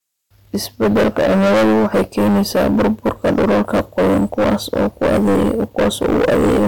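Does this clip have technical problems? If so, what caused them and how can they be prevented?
Yes. Hard clipping runs through the whole speech clip. The signal was driven about 20 dB past what the chain could pass. Roughly a third of the samples hit the ceiling and were cut flat. Those flat tops add harmonics high up the spectrum, heard as harsh fuzz on every loud sound. Prevent it by setting input gain lower, so peaks stay safely below full scale at every stage.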